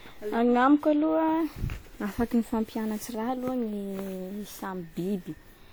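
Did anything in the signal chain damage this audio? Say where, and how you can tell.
Yes, at the codec stage: generation loss, likely from about seven lossy re-encodes near 96 kbit/s, makes the speech swirly, hollow and smeared throughout, with blurred attacks.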